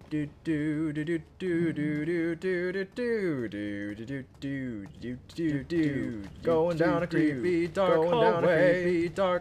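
From 5.48 s to the end, a doubled audio track appears: a second full-band copy, about as loud as the original, trails it by roughly 1.5 s, likely from a second, slower capture path. Unlike an echo, it starts abruptly and has no decay or room colour.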